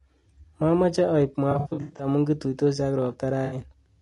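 The whole clip has a rough, grainy edge to the speech, with noise sitting between the harmonics and a thin, synthetic top end. That's likely low-delay AAC compression, AAC-ELD, with short frames starved of bits at a rate that sounds like around 32 kbps.

From 1.51 to 2.07 s there's AAC frame loss with concealment. About 300 ms of audio went missing in patches spread over roughly half a second, the longest gap around a tenth of a second. The decoder papers over each gap from the last good spectrum, so the stretch comes out smeared and noisy. A shorter dropout at 3.45 to 3.55 s loses about 60 ms and leaves a brief phasey blur.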